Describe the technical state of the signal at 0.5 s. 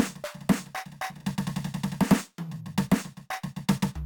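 At 0.5 s the music carries imaging from sample-and-hold upsampling, and it runs through the whole clip rather than just that moment. The rate was doubled from 24 kHz to 48 kHz by simply repeating each sample, with no smoothing filter, so a mirrored copy of the spectrum folds around 12 kHz. You hear it as a bright, metallic fizz in the 12 to 24 kHz band, sitting about 22 dB below the music and rising and falling with it.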